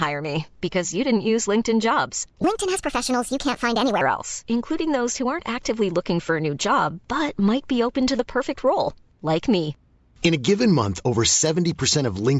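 From 2.44 to 4.01 s the speech runs fast and high, a wrong sample rate fault that ends just before "else including those who". The ratio points to 16 kHz audio played at 22 kHz without conversion, speeding it up 1.38 times and raising pitch about 5.6 semitones.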